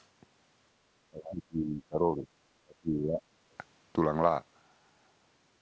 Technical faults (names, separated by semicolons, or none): other side's voice leaking through; speech suppressed in double talk